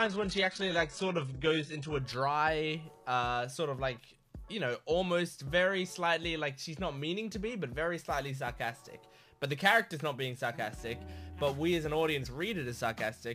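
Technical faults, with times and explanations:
0.0 to 2.0 s, adaptive stream starting at a low bitrate: Nothing is heard above about 11.1 kHz, and codec artefacts are strong. The sound suggests a very lean HE-AAC stream near 12 kbit/s. At 2.0 s quality jumps, with no gap, to something like 96 kbit/s AAC-LC.
7.96 s to the end, sample clock jitter: A rough hiss rides on the audio. It is strongest on loud, bright passages and disappears in silence. The converter clock wanders, around ten microseconds, so steep waveform slopes are sampled wrongly. The error sits about 25 dB below the signal.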